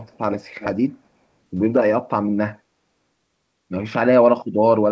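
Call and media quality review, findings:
Echo leak, 0.00–0.18 s and 0.59–0.68 s: speech copy about 370 ms late, faint, then louder at about −15 dB. Likely remote echo canceller leaking speaker pickup.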